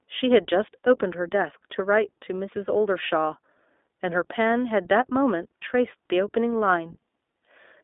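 iLBC codec damage runs through the whole of this speech clip, from start to finish. The codec rebuilds each 20 ms frame's excitation on its own rather than from the frame before, and at a rate that fits its 15.2 kbps mode this leaves the voice plainly rough and synthetic. The line is narrowband, from roughly 250 Hz up to 3.6 kHz, with nothing above 3.8 kHz, so the speech sounds thin and telephone-like.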